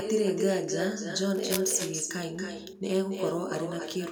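With no echo canceller on the far end, its loudspeaker output reaches its microphone and is sent straight back. From start to finish the speech is trailed by a copy about 6 dB quieter, arriving around 300 ms later, thinner than the direct sound.

From 1.34 to 1.73 s, cable scratch noise appears, likely from a worn cable, connector or control being moved so its contact resistance jumps about. It sounds like dense, uneven scratching laid over the speech, only a little below its level.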